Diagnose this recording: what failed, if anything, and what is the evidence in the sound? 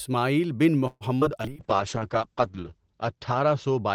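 Repeated packet loss (robotic sound), 0.87 to 1.46 s, network stage: four gaps break up the speech, the longest 133 ms. About 160 ms is bridged by stretching the preceding sound, giving a choppy quality, while another 120 ms simply drops out.

Call bitrate drop, from 1.49 s to the end, codec stage: the speech turns rough and muffled as the encoder falls from 48 to 7 kbps. Audio bandwidth shrinks from 20 kHz to 8 kHz, and the coarsest, dullest stretch lasts about 1.2 s.

Jitter buffer slow-down, 1.53 to 2.71 s, receive buffer stage: the speech drags at 93% speed without any pitch change. The receiver repeats pitch periods and slivers of pauses to rebuild its reserve, adding 94 ms and leaving drawn-out sounds.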